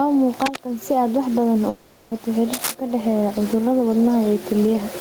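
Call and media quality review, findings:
Gain pumping, throughout. Input gain likely far too high, with a fast limiter clamping on each loud syllable. Gain swings of roughly 20 dB; background about 30 dB below speech. Dynamics squashed.

Cable scratch noise, 0.31 to 0.59 s and 2.53 to 2.75 s, the second ending just before "ka dhexeeya cudurada". Likely a worn cable or connector moved, with contact resistance fluctuating fast. Dense, uneven crackle at roughly speech level.

Long network dropout, 1.69 to 2.14 s, right after "wax badan". Stream likely stalled. The receiver concealed the gap by extending the last sound for about 420 ms as a fading buzz or hiss, with no silent stretch. Speech resumes with about 420 ms of content lost.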